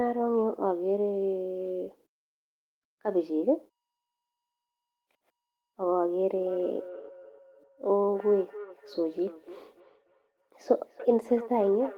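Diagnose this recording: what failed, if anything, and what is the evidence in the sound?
Call processing failed with a feedback echo between two devices. From 6.36 s to the end, the speech returns about every 0.3 s, thinner and ringier, peaking about 16 dB below the direct speech. A second device in the room replays this microphone's signal, this microphone picks it up again, and this device's echo canceller cannot remove it because it only removes what its own device plays.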